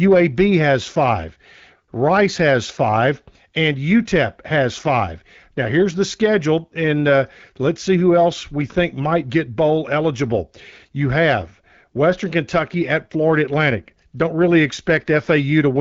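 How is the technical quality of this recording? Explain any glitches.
No glitches found; the speech sounds like an AMR wideband (HD Voice) link, band-limited to about 7 kHz and clear, which fits a rate of 12.65 kbit/s or so.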